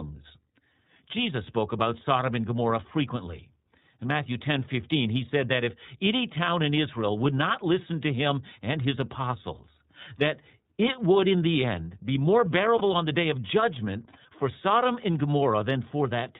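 Throughout the clip the speech carries the iLBC codec's character. It is a narrowband coding, so the spectrogram shows nothing above 4 kHz and the top half of a wideband display is empty. Each 30 ms block of excitation is coded on its own, which gives the voice a plainly audible rough, slightly synthetic edge. The damage level fits the 13.33 kbps mode with 30 ms frames, and on the waveform the grain shows as slightly smeared, less crisp pitch pulses.

From 12.78 to 12.82 s, between "the end be more" and "on the day of", one frame went missing, about 30 ms of audio. These are lost iLBC frames. The decoder filled the hole by repeating the last pitch cycle blended with noise. It sounds like a brief held, faintly buzzy vowel. The waveform shows a short run of near-identical periods, and the spectrogram shows flat, unchanging harmonics with a noisy haze. Because each frame decodes independently, the voice snaps back immediately afterward.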